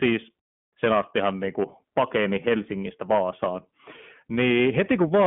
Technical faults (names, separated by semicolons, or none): iLBC codec